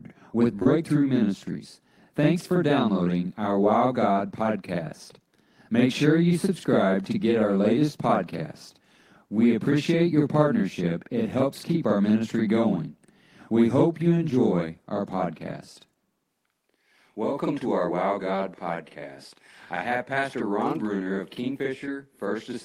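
A channel delay (doubling) runs through the whole clip. One channel arrives about 46 ms after the other, and the two are summed to mono. That lag fits a 2048-sample buffer. The late copy is too far behind to blend with the first. It sits at the same level and is heard as a second, trailing version of each syllable. Sharp onsets get a short slap echo. The speech sounds doubled from start to finish.

Short concealed packet loss comes early, from 0.59 to 0.63 s and again from 0.63 to 0.67 s. Two back-to-back chunks of about 20 ms each never reached the decoder in time. The receiver patched each gap by extending the sound just before it. The first patch covers about 15 ms, the second about 26 ms. Then it crossfades back into the real signal. The result is a brief smeared wobble lasting a few hundredths of a second.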